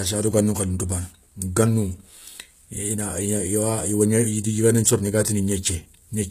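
From start to finish the speech carries a bright but synthetic treble: s sounds come out gritty and lispy, with a metallic sheen, and nothing reaches above about 14.9 kHz. The likely cause is HE-AAC compression at a low bitrate, consistent with about 20 kbps. The codec keeps only the lower spectrum and fills the top by spectral band replication, copying lower bands upward, so the rebuilt harmonics fail to line up with the real ones.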